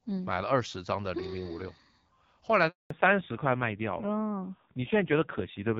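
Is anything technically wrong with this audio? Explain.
Yes, there are two linked faults partway through the speech.

A handover gap runs from 2.68 to 2.90 s. While the call switched networks, no speech frames arrived for 220 ms, so the sound fades within a few tens of milliseconds and then cuts to silence. On the waveform this is a flat line, and on the spectrogram it is an empty vertical band.

A fallback to narrowband follows from 2.90 s to the end. Before the gap, the HD Voice path sounds clear with only light coding roughness, which fits AMR-WB at around 12.65 kbit/s. After the switch, nothing remains above 4 kHz. The spectrogram shows a sharp ceiling there, and the voice sounds duller and rougher, which fits a low-rate narrowband codec near 5.9 kbit/s.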